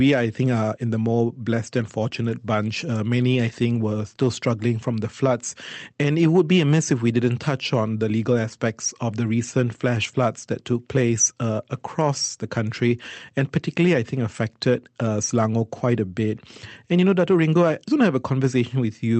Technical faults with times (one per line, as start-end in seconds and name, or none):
none